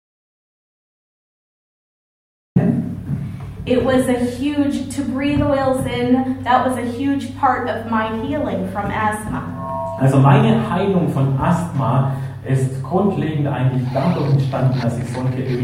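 The clip opens with an audio dropout to silence that is already under way when playback begins and lasts until 2.56 s, after which the sound comes in abruptly mid-flow. The gap is silence with no room tone at all: the waveform is flat and the spectrogram is blank before a hard vertical edge at 2.56 s. The likely cause is a lost input, such as a disconnected device or a mute, while recording continued writing zeros.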